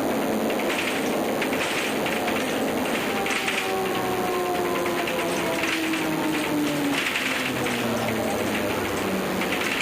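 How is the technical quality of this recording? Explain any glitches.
The recording has one persistent fault. DECT cordless phone buzz runs throughout: a nearby handset or base sends radio bursts every 10 ms, rectified into a thin 100 Hz buzz with many harmonics, roughly 15 dB below the sound.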